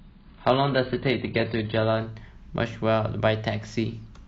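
It's a speech clip, and the first couple of seconds give away an adaptive stream starting at a low bitrate. From 0 to 2.0 s there's nothing above about 5.1 kHz, and the coding artefacts are thick, which fits an AAC stream at around 16 kbit/s. At 2.0 s the player has sized up the connection and switches to a better rendition, something like 96 kbit/s. The treble comes back all at once, with no gap.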